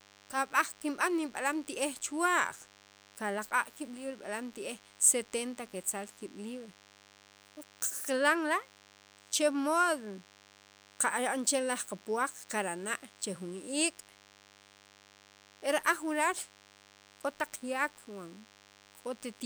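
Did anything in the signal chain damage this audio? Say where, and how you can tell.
Yes, in the analogue stage. A steady, thin buzz sits under the speech from start to finish, well below it at roughly 30 dB down, with a fundamental of 100 Hz and a dense stack of harmonics. That is DECT cordless phone buzz: a nearby handset or base transmits a brief radio burst every 10 ms, and the audio circuit rectifies it. The resulting pulse train at 100 Hz lands directly in the audio path.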